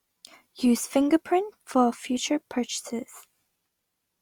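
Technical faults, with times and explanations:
No technical faults can be heard in this speech.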